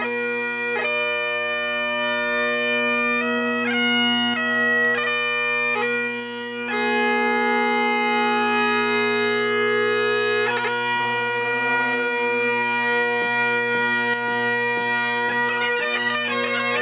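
Gain pumping runs through the whole clip. The swing is roughly 10 dB. Loud and soft passages sit too close in level, and the sound feels squashed. The likely cause is input gain set far too high, with a fast limiter or compressor clamping down on every peak. The call path is band-limited, with nothing above 4 kHz, which fits a G.711 mu-law stream at 64 kbps.

One channel drops out from 4.34 to 4.85 s. The level falls abruptly by about 6 dB and then comes back. It happens again from 14.14 s and lasts to the end. The sound is quieter for that stretch. This points to one stereo side going silent before the mono sum. Material shared by both sides halves in level, and anything carried only on the lost side vanishes. The likely cause is a lost channel feeding the downmix.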